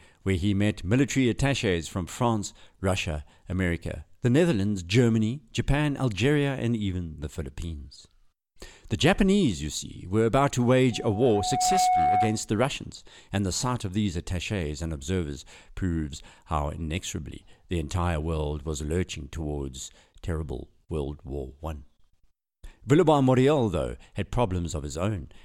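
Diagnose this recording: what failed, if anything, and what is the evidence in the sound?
Loudspeaker feedback squeal, in the acoustic loop between the playback loudspeaker and the microphone. At 10.92 s a pure 734 Hz tone rises out of the speech. It swells in under a second, peaks a few decibels above the voice, then stops at 12.49 s. At that frequency the loop gain exceeded one.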